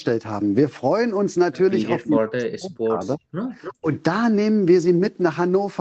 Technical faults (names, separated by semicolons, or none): speech suppressed in double talk; echo leak